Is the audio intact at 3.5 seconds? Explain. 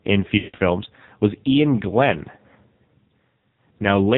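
No. At 3.5 s, as across the whole speech clip, the AMR narrowband mobile codec is at work, and heavily. It resamples to 8 kHz and rebuilds the voice from a vocal-tract model fed by sparse pulses, so the speech sounds buzzy and synthetic, which fits a low rate near 5.9 kbps. A spectrogram shows a flat ceiling with nothing above 4 kHz, and the waveform has a smoothed, pulse-driven look in 20 ms frames.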